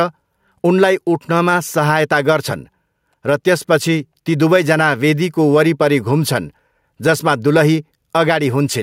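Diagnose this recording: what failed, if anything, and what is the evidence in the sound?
The level never settles. Across the whole recording there's gain pumping: the level swings by around 5 dB, and the loud and quiet syllables sit squashed close together. That points to the input or call-processing stage, with the likely cause being mic gain cranked way too high and a fast limiter or compressor clamping down on each loud sound, then releasing in the gaps.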